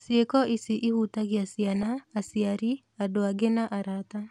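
Weak DAB reception let a small fraction of bit errors slip past error correction into the MP2 stream, corrupting audio samples. From 1.75 to 1.83 s, between "ici ihutagia" and "aciari andũ", this DAB burbling puts short blips of noise into single sub-bands, producing a brief burble over the speech.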